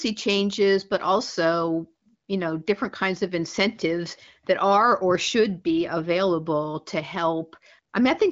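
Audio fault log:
No faults are heard in this speech clip. It carries the AMR wideband (HD Voice) codec, with nothing above about 7.6 kHz and little to no coding damage, which fits one of the higher HD Voice rates.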